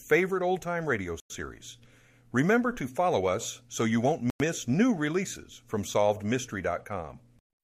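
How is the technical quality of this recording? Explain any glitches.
The speech is broken by two gaps between chunks. At 1.2 to 1.3 s, after "old time radio", and at 4.3 to 4.4 s, between "us so you won't" and "new releases from", 100 ms of silence sits at each join. The audio arrives in 3.0 s chunks with a delay between them, so nothing is lost, but the sound is interrupted by a short hole at each join.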